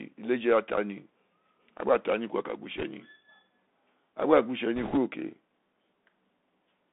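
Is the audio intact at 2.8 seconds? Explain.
No. From 2.77 to 2.84 s the audio is hit by bit errors on a Bluetooth voice link, with roughly 3 percent of bits flipped. The link codes sound one bit per sample at 64 kHz, each bit nudging the level up or down by a small adaptive step, so a wrong bit only misplaces the waveform slightly and the error fades within a few samples. The result is a brief rushing, crackly noise laid over the sound, not a loud click. That sets it apart from packet loss, which would leave a gap or repeated fragment, and from digital clipping, which would flatten peaks into harsh distortion.

Underneath, the whole passage, this moment included, carries the Bluetooth CVSD headset codec. Its effect is plainly audible. The band is confined to roughly 200 Hz to 3.6 kHz, so the sound is thin and telephone-like with no top end. A granular hiss sits beneath it, s sounds come through scratchy, and loud high-frequency content distorts where the one-bit step size cannot keep up with it. 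This constant narrowband coloration is what distinguishes the codec from the bit errors, which are confined to that 70-millisecond burst.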